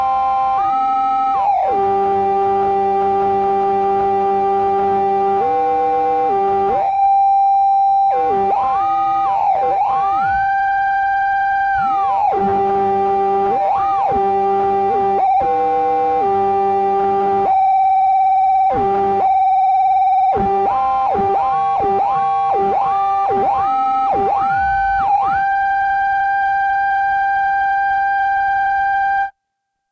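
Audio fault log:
No faults detected in this recording of sounds.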